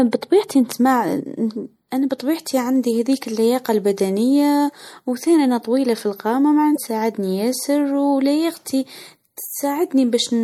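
MP3 compression runs through the whole of this speech clip and is likely the cause of its constant watery, swirly texture. The quieter high-frequency detail flickers in and out between frames as the encoder runs short of bits and drops weak frequency lines. The damage is plainly audible, and it fits a low bitrate of around 64 kbps. Damaged data in a compressed stream appears from 6.73 to 6.78 s, right after "أنا طويله في القامه". There is a short blip lasting about 40 ms where corrupted bytes make the decoder misread its frames, lose sync, and hunt for the next valid frame header before normal playback resumes.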